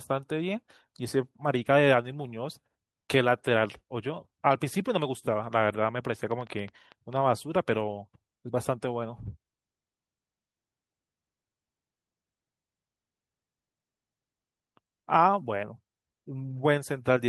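Between 6.31 and 7.17 s, something, likely electrical interference or a faulty connection or power supply, injects a short pulse into the signal again and again, producing a train of clicks. There are about seven of them, arriving at roughly 8 per second but unevenly spaced, each with much the same sharp shape. They peak at about the same level as the speech itself, so they come across as a distinct irregular ticking laid over it.

From 16.49 to 16.63 s, audio went missing in transit, but each lost stretch was replaced by the lower-bitrate backup copy carried in the packet that followed it. This is a lost packet rebuilt from error correction, and the pattern fits several separate packets, about 80 ms of rebuilt sound in all. Because the decoder filled the holes from those copies, nothing drops out. That brief stretch just turns coarser and noisier than the audio around it.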